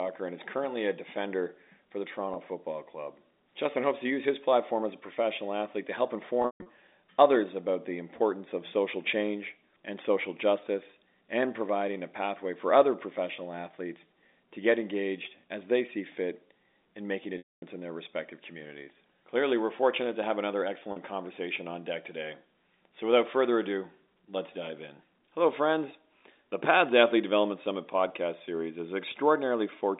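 Packet loss with pitch repetition interrupts this speech, carried over a narrowband G.711 A-law telephone line, at 2.34–2.36 s after "a defender for the", 6.42–6.66 s, 17.38–17.62 s, 20.92–20.96 s between "fortunate to have another" and "conversation on deck today", and 28.08–28.10 s before "series is". Each gap is bridged by repeating the last pitch period. The 20 and 40 ms losses sound like a brief buzzy hold. The 200 ms scattered loss and the 240 ms loss fade to silence before the speech cross-fades back.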